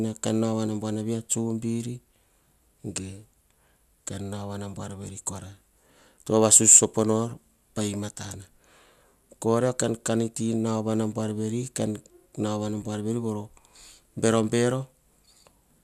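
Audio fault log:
No fault found in this speech clip.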